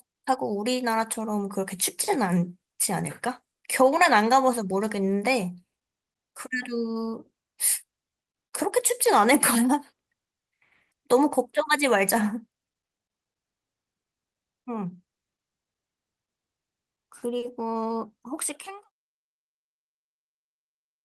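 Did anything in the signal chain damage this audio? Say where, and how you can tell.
No, nothing in the chain has damaged this speech recording, and the smooth fade out that starts around 18 s and reaches silence at 18.91 s is a deliberate edit with no click or hard edge.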